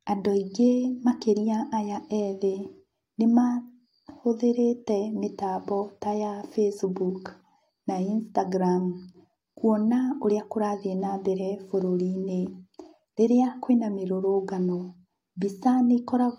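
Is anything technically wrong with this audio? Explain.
No, no technical faults here.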